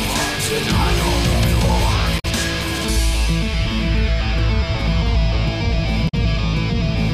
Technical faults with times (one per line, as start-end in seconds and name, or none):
2.18-2.25 damaged data in a compressed stream
6.07-6.14 damaged data in a compressed stream